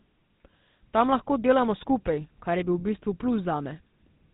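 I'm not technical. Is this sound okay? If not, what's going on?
No. The speech has been through the GSM full-rate codec, the compression used by early mobile phones, and the damage is plainly audible from start to finish. This codec rebuilds the voice from a simple model of the throat and mouth, driven by a coarse pulse signal, so the speech comes out buzzy and gravelly. It also removes everything above about 3.9 kHz, which makes the sound dull and boxy, like an old phone call.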